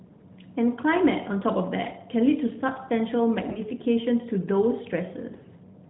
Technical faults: AMR bit errors

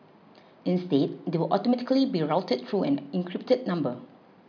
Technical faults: none

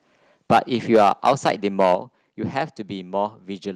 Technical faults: microphone overload; microphone volume stepped down

